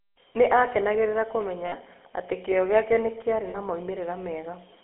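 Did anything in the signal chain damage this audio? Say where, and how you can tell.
Yes. At the codec stage, the whole clip has the buzzy, gravelly roughness of the GSM full-rate codec. Speech sits in a narrow 300 Hz to 3.4 kHz telephone band, which fits 13 kbps full rate. The pulse-driven vocal-tract model plainly coarsens every voiced sound.

At the network stage, lost GSM frames appear twice, at 1.66 to 1.74 s, just before "atĩ kĩyo gĩake nĩ", and at 3.50 to 3.58 s, right after "kĩyo gĩake nĩ kĩraarĩ". Each gap is held as a brief metallic ring as the decoder repeats the last good frame. The first gap fits about 60 ms of missing audio and the second about 40 ms.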